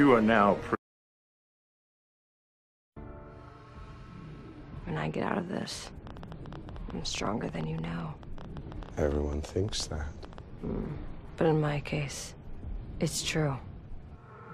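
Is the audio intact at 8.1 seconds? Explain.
No. From 5.62 to 10.39 s a train of clicks runs through the audio, about 9.7 per second at uneven spacing, peaking around 5 dB above the sound, likely from electrical interference. It ticks audibly, even in pauses, and shows as thin vertical spikes on the waveform and broadband vertical lines on a spectrogram.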